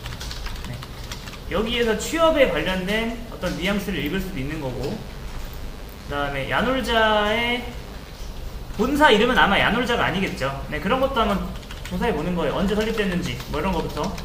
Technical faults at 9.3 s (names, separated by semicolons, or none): none